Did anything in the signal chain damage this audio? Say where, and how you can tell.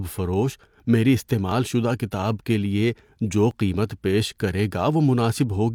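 Yes: an overlap between stream segments at the 2.0 s segment joins drops about 33 ms near 1.52 s and 35 ms near 3.51 s, heard as tiny skips and seen as waveform jumps.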